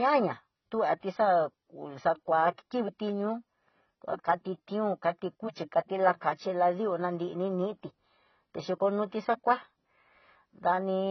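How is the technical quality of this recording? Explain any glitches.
The recording is heavily degraded for its whole length: the speech sounds dull and smeared, with nothing audible above about 6.1 kHz, and sibilants and sustained vowels take on a warbling, fizzy texture. This is likely AAC compression at a very low bitrate, on the order of 16 kbps. With so few bits, the encoder discards the top of the spectrum and quantises the remaining frequency lines coarsely, leaving gaps that shimmer and smear.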